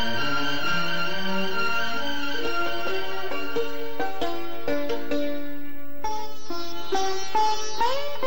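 From the very start right through to the end, there's a DC offset: the whole waveform sits shifted off zero by a constant amount, around -20 dBFS. You won't really hear it as such, but it eats headroom on one side and shows up as steady energy at 0 Hz.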